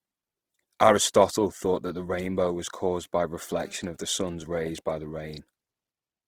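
Throughout the speech, the signal has likely gone through Opus compression in its music mode with too few bits, which fits a rate near 16 kbps. The encoder fills starved bands with folded or noise content, so the full-bandwidth sound comes out plainly grainy, rough and noisy.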